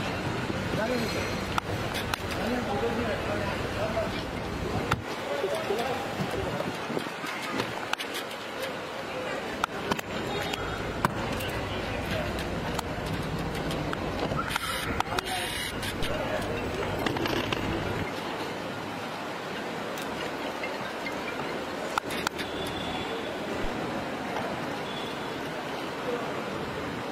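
A phantom power thump lands at 16.03 s. A supply step on the live input passes through the coupling capacitors, giving a deep thump peaking near -20 dBFS and decaying within about 43 ms.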